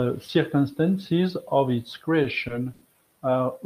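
At 2.73 to 2.84 s the speech hangs in a short stall from a late packet. The jitter buffer ran dry, so the receiver stretched the last sound for about 80 ms, with a slight buzz or dip, then resumed exactly where it paused. Unlike a lost packet, nothing is skipped; everything after simply arrives 80 ms later.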